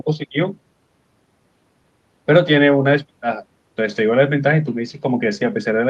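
Listening through this speech recording, which came over a call connection, nothing stood out as a technical problem at any point.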